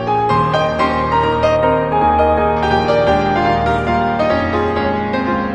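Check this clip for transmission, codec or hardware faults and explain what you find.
One fault is present: channel delay causing comb filtering. From 1.56 to 2.56 s one channel lags about 0.1 ms. Summed to mono, this cancels near 5 kHz, sounding hollow. A spectrogram shows a fixed dark notch band.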